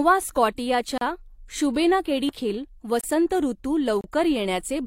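Gap between stream segments at 0.98 to 1.01 s: a hard-edged hole of 34 ms cuts into the speech. The time stamps of two adjacent segments don't quite meet, so the player inserts silence in the space between them. Nothing is discarded; the speech simply resumes late.

CD skip at 2.29 s: a brief tick with a mute of only a few milliseconds, after which the speech carries on from a different point. A knock or a surface flaw pushed the laser onto another turn of the disc's spiral, and playback picked up from there.

Gap between stream segments again at 3.01 to 3.04 s (26.6 ms) and 4.01 to 4.04 s (29.5 ms). These holes, with the first, sit at segment boundaries spaced about 1.0 s apart. That regular spacing points to a timing mismatch where each segment is joined to the next, not to damaged audio.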